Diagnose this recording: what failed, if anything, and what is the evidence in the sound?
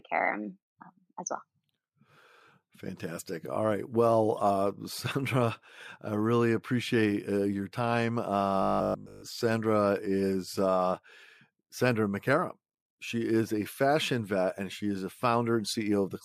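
From 8.62 to 9.22 s the speech collapses into a rigid, metallic buzz at 50 Hz that only loosely tracks the words. This is robotic sound from repeated short buffers, likely a driver or buffer underrun, with essentially the whole span built from 20 ms blocks replayed while new audio was skipped.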